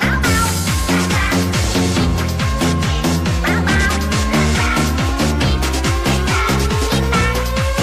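A single sharp pop, a loud pop, cuts in at 2.04 to 2.07 s, peaking somewhere around 10 dB above the surrounding sound, which carries on underneath it. It is likely a voltage spike from a plug, a switch, static or a driver glitch.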